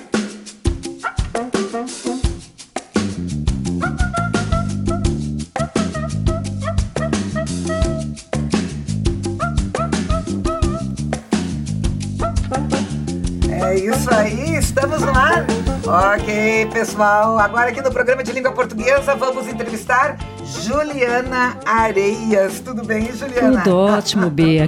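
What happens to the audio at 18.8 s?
Nothing goes wrong at 18.8 s; the audio plays through that moment intact, with no dropout, glitch or distortion to be heard.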